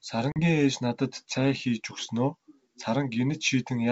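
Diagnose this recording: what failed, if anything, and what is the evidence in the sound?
The network stage failed, causing packet loss on an ADPCM call. A hard-edged silent hole runs from 0.32 to 0.40 s. About 40 ms is missing, roughly two packets. Speech returns at "ээж надад цай хийж" slightly distorted. The decoder's predictor and step size drifted from the sender's. They resynchronise within tens of milliseconds.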